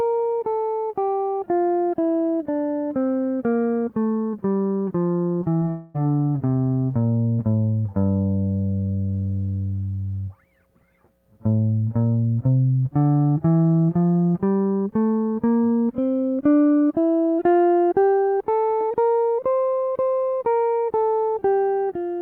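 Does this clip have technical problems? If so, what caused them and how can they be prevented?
Yes. The first fault is short concealed packet loss: around 20 ms of the stream failed to reach the decoder in time at 5.43 s, 5.59 s and 5.65 s. Each time the receiver invented a replacement by extending the music just before the gap, for 12 to 18 ms, then crossfaded back into the real signal. In this music clip that comes across as three quick smears or wobbles in close succession. A larger jitter buffer with forward error correction would prevent it.

The second fault is a long network dropout, likely a stall in the network path, from 5.70 s to 5.96 s. About a quarter of a second of music never arrived. The receiver filled the whole gap by continuing the last sound, which turns into a fading buzz or hiss, so no silence opens up. The music then resumes further along, with that stretch gone for good. 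A steadier connection with redundant transmission or retransmission would keep it from recurring.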